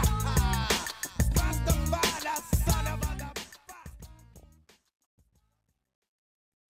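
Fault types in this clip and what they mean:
Truncation distortion on a fade: The fade-out becomes rough from about 2.69 s onward. The volume stage drops low-order bits without dither. The graininess fits a path only about 12 bits deep. As the level sinks, each sample lands on fewer and coarser steps, so the waveform turns blocky. From about 4.51 s to the end the tail grows gritty.
DAB burbling: A short burst runs from about 4.37 s to 4.43 s, inside the fading tail. Errors from weak reception have slipped past the error correction into the compressed audio data. Damaged samples put short blips of noise into single frequency bands, and damaged scale factors make bands jump in level for up to a frame. The burst sounds like about five corrupted frames, which fits a small fraction of a percent of bad bits. It comes across as a brief burst of burbling.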